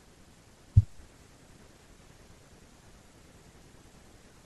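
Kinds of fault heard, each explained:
Corrupt frame decoded: damaged compressed frames played anyway, adding faint, brief blips at wrong frequencies near 0.73 s and 1.81–1.84 s, unlike a dropout's silent gap.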